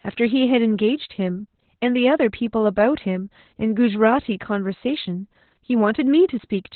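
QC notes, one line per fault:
throughout, Opus voice compression: nothing above 4.3 kHz, and coarse excitation coding leaves speech hoarse and robotic, unlike a plain low-pass; fits narrowband SILK near 8 kbps.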